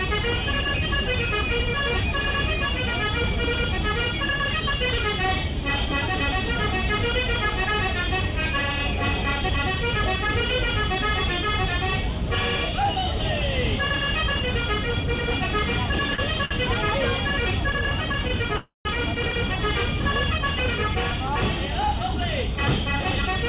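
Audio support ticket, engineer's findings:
Short stall from a late packet, two events. Sound held and stretched at 16.14 s for 42 ms and at 16.45 s for 54 ms, with nothing lost. Jitter buffer ran dry when a packet missed its slot, so the receiver extended the last sound until it arrived. Playout delay grew by the same amounts.

Call audio freeze at 18.56 to 18.88 s. The last sound carries on for 287 ms, including 110 ms of silence, then resumes where it stopped with nothing missing. Likely packets held up in transit, leaving the jitter buffer empty. The receiver filled the wait, adding 287 ms of delay.

Jitter buffer speed-up from 20.78 to 23.38 s. Playback runs at 103% speed with pitch unchanged. Buffer held more audio than its target, so the receiver trimmed short pitch-period pieces repeatedly, around 70 ms in total. Nothing above 4 kHz throughout, which fits a narrowband call codec such as G.711 A-law.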